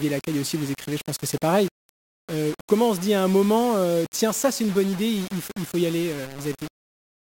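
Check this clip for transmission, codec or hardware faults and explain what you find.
One fault runs through the whole speech clip: low bit depth without dither.

Throughout, the speech sounds grainy and harsh, with a gritty distortion that tracks the voice, and quiet tails sputter or cut to silence. That likely comes from undithered rounding to very few levels, which fits roughly 5 bits, leaving error only about 15 dB down.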